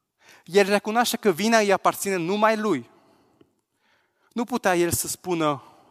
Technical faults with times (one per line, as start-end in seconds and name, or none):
none